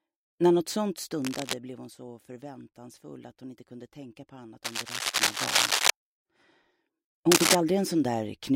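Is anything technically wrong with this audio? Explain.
Yes. Cable scratch noise at 1.22 to 1.54 s, 4.64 to 5.90 s and 7.31 to 7.55 s, likely from a worn connector whose contact resistance fluctuates, adds rough scratchy bursts, roughly as loud as the audio or louder.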